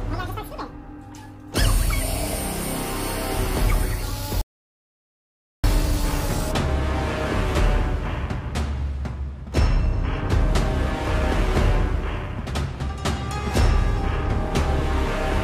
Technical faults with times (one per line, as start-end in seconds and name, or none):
4.41-5.64 audio dropout to silence